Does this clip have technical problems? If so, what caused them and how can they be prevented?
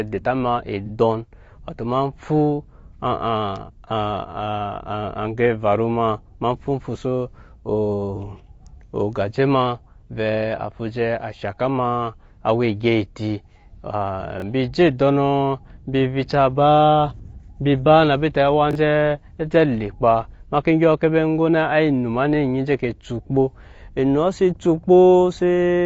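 Yes. Throughout, the speech sounds rough and grainy, with noise filling the gaps between harmonics and a dull, somewhat synthetic top band. This is likely low-delay AAC compression (AAC-ELD) at a low bitrate near 32 kbps, where its short frames resolve pitch poorly. Prevent it by raising the bitrate.

From 0.86 to 0.90 s there is a brief smeared, noisy patch lasting 30 ms. This is AAC frame loss with concealment: one frame's worth of data went missing, and the decoder rebuilt it from the preceding spectrum. Prevent it with forward error correction or a larger jitter buffer.

From 14.38 to 14.42 s and from 18.71 to 18.75 s, the sound briefly jumbles. These are chunks out of order: a 21.33 ms block, which fits 1024 samples at 48 kHz, played one chunk late, leaving hard joins. Prevent it by sequencing buffers correctly before playback or writing.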